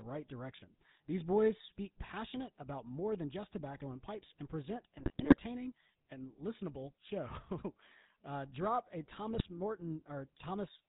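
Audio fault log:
throughout  GSM full-rate codec: the speech passes through the first GSM coder, which fits a 13 kbps full-rate link. It rebuilds the voice from a vocal-tract filter fed by sparse, regularly spaced pulses and keeps nothing above 4 kHz, so the voice sounds muffled, buzzy and gravelly.
4.98–5.38 s and 9.34–9.50 s  GSM bit errors: corrupted bits reach the decoder, first right after "and pipes and present", then after "uh drop a". Damaged filter, pitch and gain values distort the spectrum and throw the level around from frame to frame, so the voice breaks into squawks, pops and gargling.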